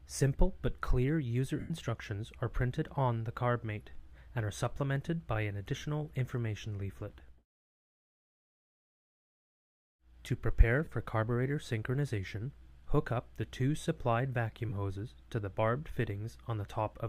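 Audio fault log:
1.60–1.71 s, 10.85 s, 14.69–14.72 s, lost LE Audio frames: brief noisy smears replace the sound as the LC3 decoder recycles the last spectrum with randomised signs.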